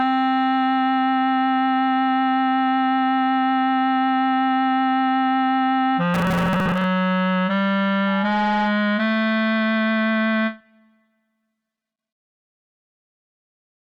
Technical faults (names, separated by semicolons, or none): robotic sound from repeated short buffers; loudspeaker feedback squeal